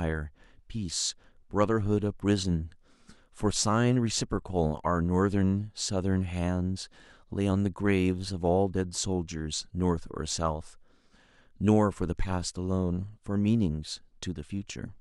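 No technical faults are audible.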